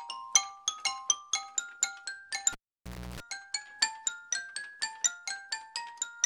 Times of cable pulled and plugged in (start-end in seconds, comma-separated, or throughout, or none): 2.52-3.20